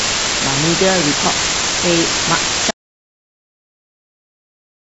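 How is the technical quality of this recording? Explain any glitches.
Technical quality is poor: a heavy hiss covers the speech from start to finish, and the audio cuts to dead silence before the clip ends.

Low bit depth with dither runs through the whole clip. A constant, even hiss sits at roughly the same level as the speech itself, yet without gritty or crunchy distortion. The signal has been reduced to just 3 bits, and dither noise was added before rounding to so few levels. That turns what would be harsh rounding distortion into steady white noise, but at this resolution the noise is as loud as the talking.

An audio dropout to silence begins at 2.71 s and lasts to the end. The speech stops abruptly mid-flow and gives way to silence, with no room tone left. The likely cause is that the input was lost, through a disconnected device, a failed link or an accidental mute, while the recorder kept writing silence. 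Whatever was said in that final stretch is not recoverable.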